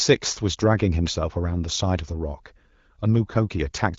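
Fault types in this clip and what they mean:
No faults can be heard in this speech.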